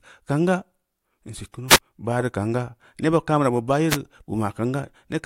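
At 1.69 s a wireless microphone noise hit lasts about 90 ms. Another follows at 3.89 s for about 70 ms. Each time the FM radio link fades as reflected signals cancel. Receiver noise surges over the speech as a brief swish of static.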